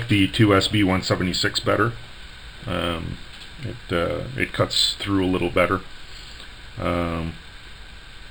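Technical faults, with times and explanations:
Throughout, imaging from linear upsampling: crude straight-line interpolation, pointing to a 12 kHz to 44.1 kHz rate change, dulls the top and mirrors the spectrum into 6 to 12 kHz, roughly 20 dB down, as a faint metallic shimmer. Unlike aliasing, it lies above the original band.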